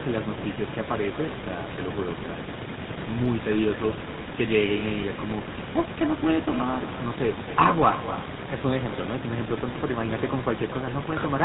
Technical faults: echo with no canceller; GSM full-rate codec

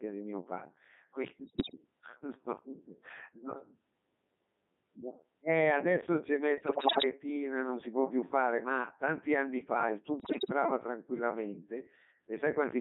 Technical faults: Codec 2 vocoder; bit errors on digital voice radio

